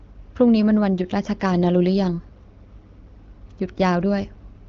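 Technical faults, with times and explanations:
No technical faults detected.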